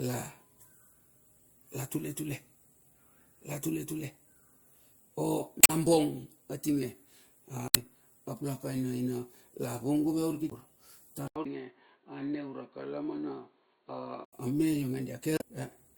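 Damaged data in the compressed stream first appears at 5.61 to 5.70 s and again at 7.68 to 7.77 s and 10.49 to 10.53 s. Corrupted bytes leave the decoder unable to parse those frames, so it loses sync and hunts for the next valid header. Each event is a brief chirp, squawk, click or short hole.

At 11.28 s the sound turns dull and boxy after an 80 ms gap, likely because the input switched to a poorer device. Nothing passes above 4.4 kHz, the level falls by about 5 dB, and a new background noise sits roughly 55 dB under the signal. A further corrupted-frame blip at 11.42 to 11.46 s lands inside this stretch. Full bandwidth returns at 14.33 s.

A final instance of damaged stream data at 15.36 to 15.42 s produces the same kind of brief glitch as the earlier ones.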